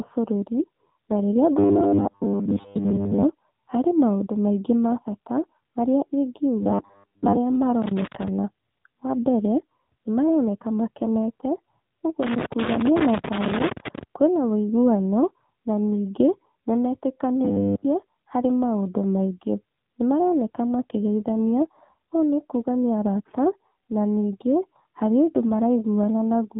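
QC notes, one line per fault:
Throughout: AMR narrowband mobile codec. The speech is band-limited with nothing above 4 kHz, and at 7.4 kbps the coding damage is plainly audible. The vocal-tract model and sparse pulse excitation leave voiced sounds buzzy and synthetic, and consonants lose their crispness. The whole clip has the boxed-in, thin quality of a low-rate mobile call.
1.59–3.24 s, 6.63–7.38 s, 17.45–17.85 s: robotic sound from repeated short buffers. The speech turns into a rigid metallic buzz fixed at 100 Hz that still roughly tracks the syllables. The first run ends just before "harĩ maũndũ maĩngĩ ma" and the last just before "harĩ maũndũ maingĩ". The 100 Hz pitch fits one 10 ms buffer being looped, and most of the real audio is replaced by repeats and lost. The likely cause is audio arriving too seldom, with playback filling the gap by re-reading the last buffer.
7.82–8.28 s, 12.23–14.03 s: loose connector crackle. 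These are irregular bursts of scratchy crackle laid over the speech, and the longer burst ends just before "kwĩna uiguano na ningĩ". A worn or dirty contact making and breaking intermittently chops the signal into fragments, so the texture is uneven rather than a steady noise.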